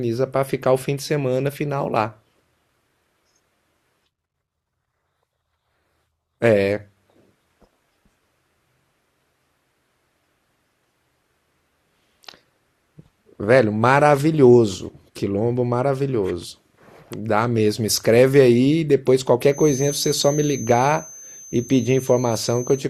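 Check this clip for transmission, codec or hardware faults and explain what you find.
There is one fault, a feedback whistle, from 19.47 s to the end of the speech. A thin 6.2 kHz tone sits roughly 20 dB below the speech and swells and fades slowly in level. On a spectrogram it is a steady horizontal line. The likely cause is a loudspeaker-to-microphone loop held just at the edge of feedback.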